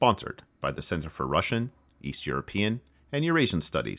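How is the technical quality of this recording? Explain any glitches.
No glitches or technical faults can be heard here.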